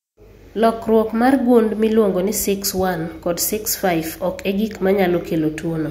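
No technical faults can be heard anywhere in this speech recording.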